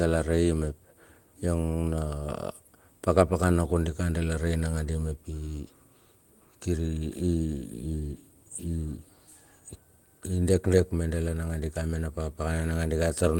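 No technical faults can be heard anywhere in the speech. There is nothing to place in time and no mechanism to explain.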